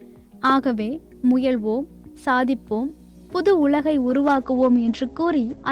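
A call bitrate drop runs from 4.01 s to the end. Coding falls from 32 to 12 kbps. Highs above 8 kHz vanish, leaving coarse, muffled audio.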